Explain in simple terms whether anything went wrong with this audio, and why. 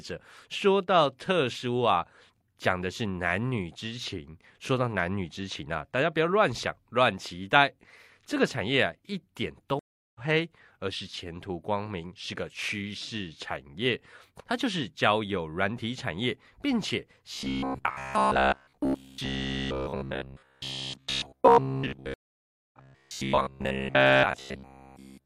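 Twice the speech drops out and picks up slightly ahead. From 9.79 to 10.19 s there is about 0.36 s of silence, and the talk resumes roughly a fifth of a second further on. From 22.14 to 22.79 s there is about 0.59 s of silence, and it resumes about 0.4 s later. Each is a stream reconnect: the connection broke, the player restarted in mid-stream, and the speech in between was lost.

From 17.34 s to the end, the voice becomes a stiff, metallic buzz pitched at 66.8 Hz. This is robotic sound from repeated short buffers. The likely cause is that new audio arrived too slowly, so the player kept replaying a tiny 15 ms scrap, and nearly all of the real speech was skipped.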